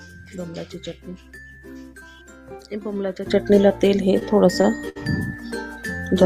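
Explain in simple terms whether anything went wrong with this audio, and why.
Something in the chain most likely switched its volume setting in one step at 3.26 s instead of easing into it. This is a sudden gain jump: from that moment to the end, the sound and its background noise both become clearly louder at once.

At 4.19 s, 4.62 s and 4.89 s, short stalls from a late packet occur. A piece of audio arrived late, so the receiver held the last bit of sound until it caught up. Each moment is stretched by roughly 17, 21 and 65 milliseconds.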